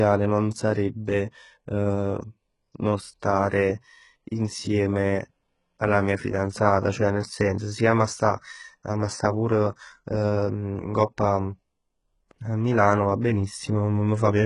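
Throughout the speech, the treble sounds copied rather than real, and nothing reaches past 11.1 kHz, which points to very low-bitrate HE-AAC compression, likely around 12 kbps. The s sounds come out gritty and lispy rather than simply dull.

From 13.21 to 13.24 s, a brief hiss of about 31 ms leads into an attack and softens it. This is pre-echo: coding noise spread backward before the transient. A click would instead be a single sharp tick.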